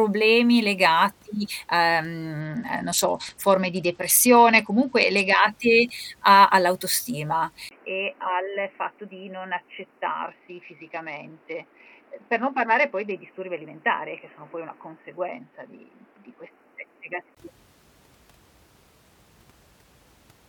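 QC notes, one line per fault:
2.40–5.40 s, 10.28–13.11 s, 15.32–16.50 s: Bluetooth SBC bit pool drop. The treble dulls and gritty quantisation noise rises, which points to the bit pool falling from 31 to about 10 (around 77 kbps). The top sub-bands get few or no bits, and the rest are coarsely quantised until the rate recovers.
7.69–17.37 s: input switched to a poorer device, likely a change to another microphone or a headset call profile. Just after "a all'autostima" a 20 ms gap appears. The speech then turns narrow and boxy with nothing above 3 kHz, drops about 10 dB, and gains a noise floor roughly 30 dB below the signal.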